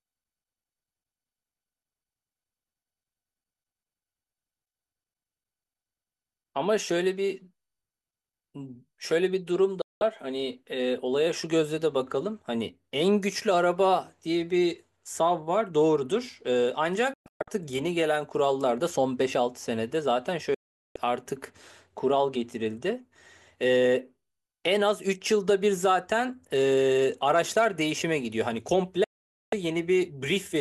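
Speech that abruptly falls silent four times: near 9.82 to 10.02 s, 17.14 to 17.48 s (several short holes here, the longest 120 ms), 20.54 to 20.96 s and 29.04 to 29.53 s, each cut with a fast 3 ms fade. This is digital broadcast dropout. The receiver muted when frames were lost or failed their checks, in gaps fitting frames of about 24 ms, and resumed only when clean frames arrived, so the sound sent during each gap is gone.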